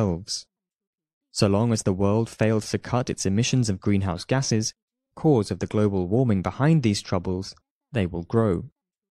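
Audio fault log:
No faults detected anywhere in the speech.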